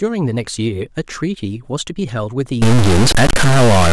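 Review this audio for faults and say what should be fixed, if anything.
From 2.62 s to the end of the clip, the speech turns harsh and buzzy, and the pauses fill with a gritty noise instead of silence. This is likely a stuck bit: one bit of every sample is held at a fixed value, so about half the samples are thrown off by a step of about -10 dBFS, in a pattern that follows the waveform. Around zero that bit changes with the sign of the signal, which is why the quiet gaps become noisy. Checking the converter and its data lines for a broken or shorted connection, and running a bit-pattern test across the interface, would prevent it.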